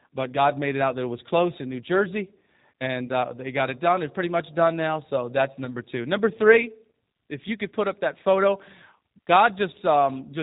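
Throughout, the speech carries plainly audible G.729 codec damage: a slightly rough, synthetic quality and nothing above 4 kHz, which fits an 8 kbit/s G.729A stream. The sound is rebuilt from a vocal tract filter, a pitch predictor and a few pulses per frame. On a spectrogram, the band above 4 kHz is empty.

At 3.06 to 3.09 s, just before "uh they got it", VoIP packet loss concealed by the speech codec fills about 20 ms of missing audio. The decoder stretches its last pitch and filter into a brief, fading stand-in for the lost sound. The waveform shows a short, fading repeated cycle, and the spectrogram shows flat, smeared harmonics.

At 5.65 to 5.76 s, right after "done now so that's", the same concealment covers another 20 ms gap. Because each frame builds on the previous one, the voice stays weak or distorted for the rest of the span. The waveform shows a decaying, periodic envelope, and the spectrogram shows blurred horizontal harmonic streaks.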